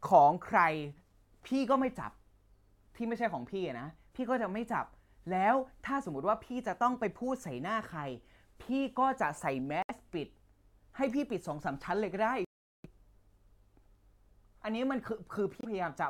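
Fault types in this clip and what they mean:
Bluetooth stall: The speech drops to dead silence three times and then carries on, at 9.82 s for about 68 ms, at 12.45 s for a much longer 396 ms, and at 15.61 s for just 26 ms. That stop-and-resume pattern is most likely a wireless link losing packets to interference, so the headphone buffer runs empty and playback just waits for the resent data to arrive before picking back up.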